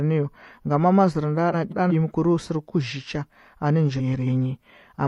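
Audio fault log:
1.52–1.92 s and 3.99–4.28 s, frames out of order: a garbled flutter, where neighbouring runs of about 186 ms and 139 ms play swapped, consistent with blocks of four and three codec frames decoded in the wrong order, with no time lost.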